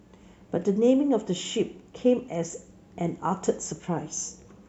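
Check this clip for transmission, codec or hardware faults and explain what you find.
Nothing to flag here: listening through the whole speech recording, there's no sign of any transmission, codec or hardware trouble.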